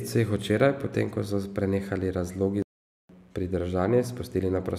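Speech that cuts out abruptly right after "ko so prenehali razlogi", going silent from 2.62 to 3.09 s, about 0.47 s, before the sound returns. This is a playback stall, likely caused by the player running out of buffered data or its audio thread being blocked.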